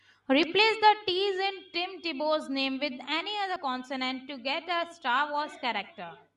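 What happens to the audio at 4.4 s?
Nothing goes wrong at 4.4 s; the speech carries on intact through that moment, with no dropout, click or distortion.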